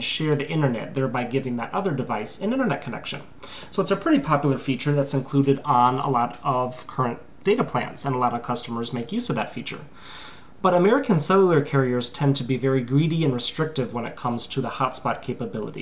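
No technical faults can be heard anywhere in the signal.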